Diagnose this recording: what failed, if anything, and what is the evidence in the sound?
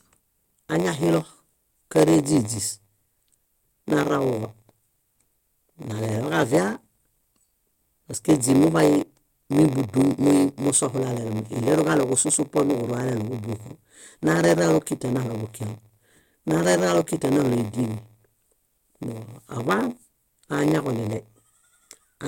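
A steady buzz at 93.8 Hz sits under the speech for the whole recording, and the talking runs slow, at 0.938 times normal speed, though the timbre is kept. This is a block size mismatch (padded) at the driver or buffer stage. The writing stage hands over blocks shorter than the reading stage takes, which fits a 512-sample read block. The shortfall in each block is filled with silence, so a brief gap recurs at the block rate and stretches the timing.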